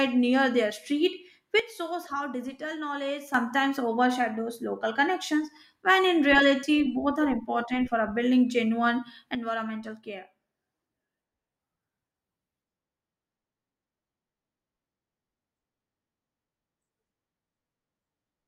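Speech whose level drops abruptly by about 10 dB from 1.60 s to 3.34 s, then by about 9 dB from 9.35 s to the end, with background noise falling in step. This is likely a sudden gain jump, digital gain switched between samples without a ramp.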